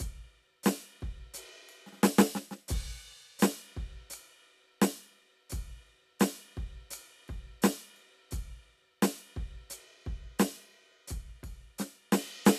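No technical faults turn up anywhere in this music recording. Nothing interrupts or disturbs the audio at any point.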